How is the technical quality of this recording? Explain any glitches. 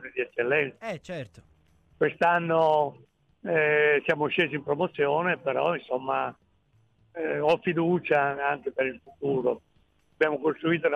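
No technical glitches are audible.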